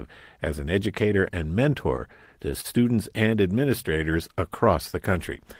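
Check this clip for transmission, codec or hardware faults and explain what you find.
Two network-related faults affect this speech clip, both from the receiver's jitter buffer coping with uneven packet arrival.

From 1.83 s to 2.66 s, right after "as an educator and", the speech catches five times in quick succession. Each hiccup briefly holds the preceding sound in place, the longest for about 39 ms, giving a halting, dragging quality without any sound actually dropping out. This is repeated stalls (stutter). Packets reached the receiver late or slower than playback consumed them, so the jitter buffer kept running dry. Each time, the receiver extended the last sound until fresh data arrived. Across that stretch about 91 ms was filled this way, roughly 11% of the span.

From 3.49 s to 3.99 s the speech sounds slightly drawn out, running at about 93% of normal speed while the pitch stays unchanged. 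That half-second grows by about 44 ms. This is a jitter buffer slow-down. With its reserve low, or after raising its target delay, the buffer rebuilt a cushion by repeating single pitch periods and small fragments of pauses. That stretches the timing without lowering the pitch.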